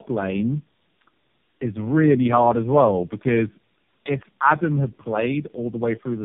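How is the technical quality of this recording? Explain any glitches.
Poor, because one fault runs through the entire recording. Tandem speech coding is present from start to finish. The call was decoded and re-encoded at each network boundary, passing through four speech codecs in a row, so every coder had to work on the previous one's damaged output. The sound fits a chain like CVSD, AMR-NB, G.729A and AMR-NB again, ending at around 5.9 kbit/s. The speech is rough, muffled and warbly, and it has nothing above 3.4 kHz.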